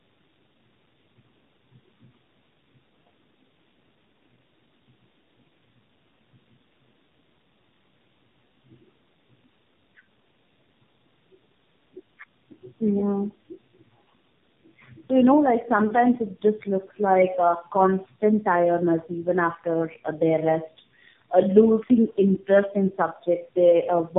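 Throughout, the speech shows tandem speech coding: a second narrowband coder re-encodes the first coder's already degraded output, consistent with chained AMR-NB. Nothing sounds above 3.7 kHz, and the compounded roughness and warble run heavier than any single low-rate coder would leave.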